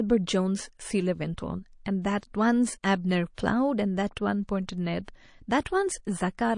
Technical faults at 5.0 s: MP3 compression; pre-echo

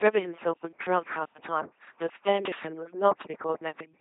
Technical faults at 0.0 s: overdone noise removal; LPC-10 vocoder

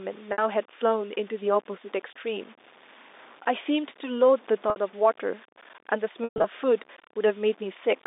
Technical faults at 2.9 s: low bit depth without dither

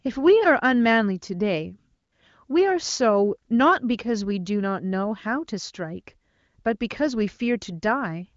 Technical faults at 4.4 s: none

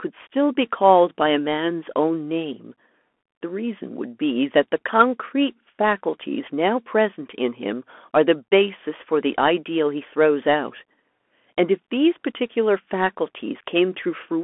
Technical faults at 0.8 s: Bluetooth CVSD headset codec

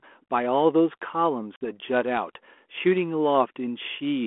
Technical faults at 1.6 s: packet loss on an ADPCM call

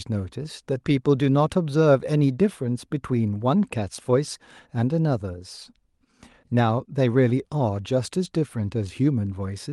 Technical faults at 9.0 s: none

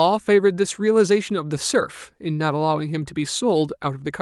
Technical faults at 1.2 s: none

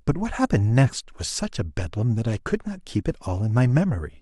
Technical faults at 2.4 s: none

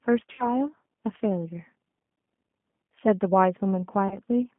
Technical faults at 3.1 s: G.729 codec

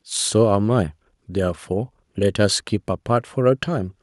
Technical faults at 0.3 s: none

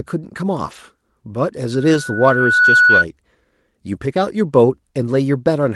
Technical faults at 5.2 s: none

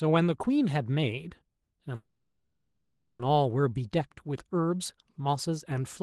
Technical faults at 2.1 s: call audio freeze

